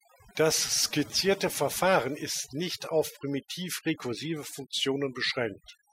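From start to finish the background sinks to near silence dotted with twinkling specks. This is overdone noise removal: a reduction setting so strong that bands near the noise estimate are cut away, taking quieter speech detail with them.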